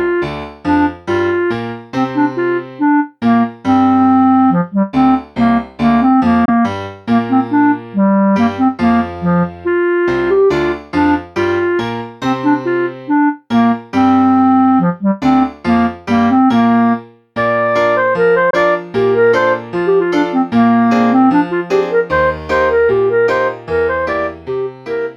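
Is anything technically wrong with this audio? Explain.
Yes, there are two brief gaps. Packets likely missed their delivery deadline on a Bluetooth link and were discarded, causing a Bluetooth dropout at 6.45–6.49 s and again at 18.50–18.54 s: each gap is a silence about one lost frame long, roughly 23 ms, after which the sound resumes as though it had kept playing.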